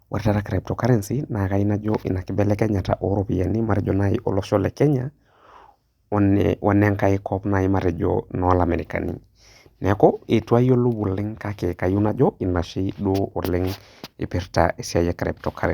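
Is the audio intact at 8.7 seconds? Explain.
Yes, the audio at 8.7 seconds is intact, with no dropout, click, distortion or other fault at that moment.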